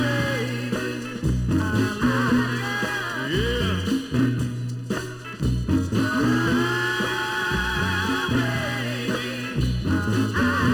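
From start to finish the audio carries channel delay (comb filtering). One channel lags the other by a little under a millisecond, and summing them to mono cancels shared content at evenly spaced frequencies, starting around 700 Hz. The result sounds hollow and phasey throughout.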